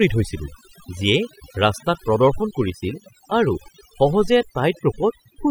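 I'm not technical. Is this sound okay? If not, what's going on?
No. Throughout, the background drops into near-silent gaps full of twinkling specks. That's overdone noise removal: a cleanup tool set too strong, stripping quiet parts of the voice along with the noise.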